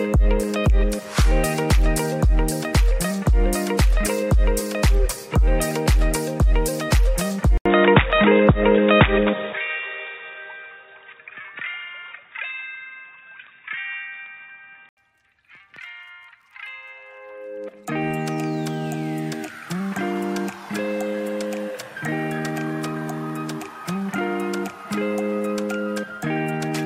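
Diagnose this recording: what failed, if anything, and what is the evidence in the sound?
At 7.58 s the sound drops out for about 80 ms, then comes back dull and boxy, with nothing above 3.8 kHz, a level shift of roughly 5 dB, and a new, fairly low noise floor underneath. At 14.97 s it opens back up. That's at the input/driver stage, with the recording most likely switched to a poorer device, say a headset's call profile, whose narrower band, different gain and own background noise replace the original mic for that stretch.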